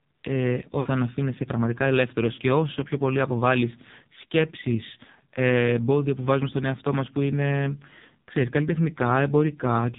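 AMR narrowband mobile codec damage runs through the whole clip: nothing above 4 kHz survives, and the heavy buzzy, synthetic colouring of the voice points to a low mode around 5.9 kbps, where few pulses per subframe drive the vocal-tract model.

Lost AMR speech frames occur at 0.80–0.88 s and 2.34–2.40 s, gaps of about 60 ms and 40 ms that fit three and two 20 ms frames. The decoder repeats the last good settings with falling gain, so the sound smears and dips, then returns rough.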